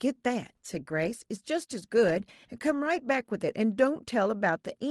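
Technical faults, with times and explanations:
The speech comes through a normally working WebRTC call path, with the ordinary coding texture of a low-bitrate call codec such as Opus and the top end rolled off around 12 kHz.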